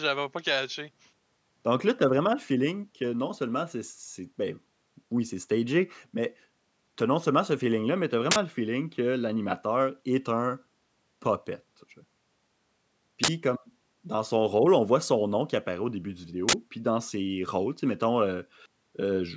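Uninitialised buffer faults occur at 8.31 s, 13.24 s and 16.49 s in this speech. Each time, a block was sent to playback before any audio had been written into it, so leftover memory contents were read as samples. The result is a short, loud burst of harsh digital noise lasting about 46 ms, which fits a 2048-sample block at 44.1 kHz. The call's sound is band-limited, holding nothing above 8 kHz.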